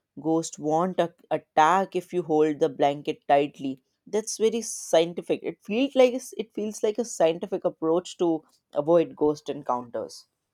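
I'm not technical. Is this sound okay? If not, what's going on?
Yes, no faults heard here.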